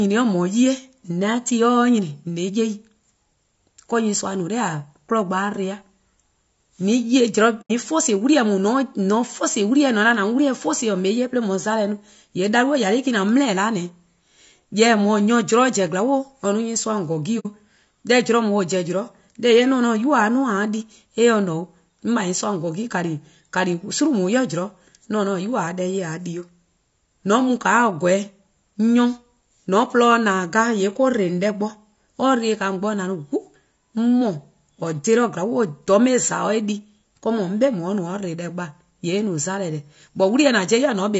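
Low-delay AAC compression is plainly audible throughout the speech. It has a rough, grainy texture, with noise filling the gaps between the pitch harmonics and a thin, artificial-sounding top end. The likely cause is AAC-ELD, the low-delay coder used for video calls, running at a low bitrate that fits about 32 kbps. It codes about 500 frequency lines a frame with a low-delay window.

AAC frame loss with muting occurs from 7.61 to 7.71 s and again from 17.39 to 17.46 s. The first hole lasts about 90 ms, which fits three lost frames, and the second about 60 ms, which fits two. The decoder zeroed the missing spectra, and the overlapping windows fade the sound out and back in, so each dropout is a soft-edged silence.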